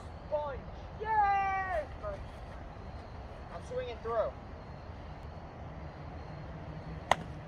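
No technical faults can be heard at any point in the audio.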